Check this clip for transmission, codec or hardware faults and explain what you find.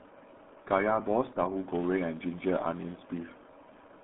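Two faults are audible in this speech clip, one spanning the whole recording and one from 1.65 s onward.

RealAudio 14.4 codec, throughout: the speech passes through a very low-rate dial-up-era coder, consistent with 8 kbit/s. It keeps only a narrow line band of about 150 Hz to 3.6 kHz, with nothing above 3.8 kHz. Heavy coding damage makes the speech muffled and gargly.

Filter restarted on every block, from 1.65 s to the end: a filter discards its memory at each block boundary and restarts from silence, so every block opens with a small transient. These repeat as a buzz at about 188 Hz, consistent with 256-sample blocks, rising and falling with the speech level.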